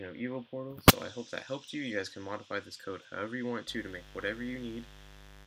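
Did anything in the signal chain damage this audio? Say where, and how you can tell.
Yes. From 3.66 s to the end a steady, raspy mains buzz sits roughly 20 dB under the sound. This is an analogue wiring fault: a dimmer, rectifier or poor shielding is injecting switching spikes twice per 50 Hz cycle, spraying harmonics up into the kilohertz range.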